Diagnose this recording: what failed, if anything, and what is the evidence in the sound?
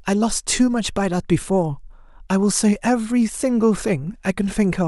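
The sample-rate converter, going from 48 kHz to 44.1 kHz, was restarted on every block, leaving a small error at each block edge. From 3.01 s to the end, the speech carries a 100 Hz buzz, which fits 10 ms blocks, and it sounds only while speech is present.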